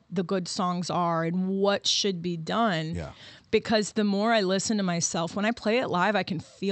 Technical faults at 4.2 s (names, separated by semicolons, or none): none